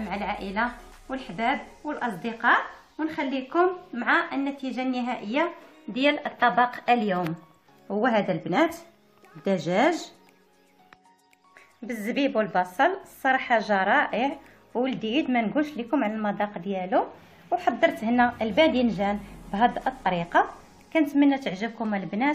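Whole compressed frames were dropped before playback, either lost from the file or rejected by the decoder, so the audio skips ahead: roughly 20 ms goes missing around 6.10 to 6.12 s, and about 70 ms at 20.06 s.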